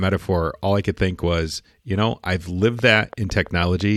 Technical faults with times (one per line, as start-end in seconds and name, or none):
2.62-3.97 train of clicks